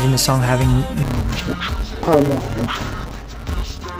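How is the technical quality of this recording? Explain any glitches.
The recording is clean until 1.03 s, when it turns dull and robotic with a steady buzz near 172 Hz, persisting to the end. This is interleaved audio read as planar in 256-sample blocks (5.8 ms): alternating samples are split into halves, smearing detail and adding the block-rate buzz without an octave drop.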